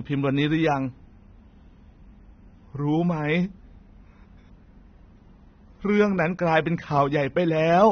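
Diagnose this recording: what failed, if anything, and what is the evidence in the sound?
AAC compression throughout the speech, at the codec stage. Nothing is present above 6.3 kHz, and the sound is dull and smeared with an audible warbling, fizzy texture. This fits AAC-LC near 24 kbps, likely cutting the top band and coarsely quantising the rest.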